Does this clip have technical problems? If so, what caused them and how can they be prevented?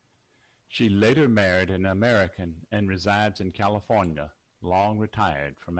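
Yes. Lost packets rebuilt from error correction at 1.39 s and 4.81 s: each time one 20 ms packet of this speech went missing and the decoder played the low-bitrate copy carried in the next Opus packet, leaving a brief rough, noisier patch instead of a gap. Reducing packet loss on the network, for example with a wired connection or less competing traffic, prevents these patches.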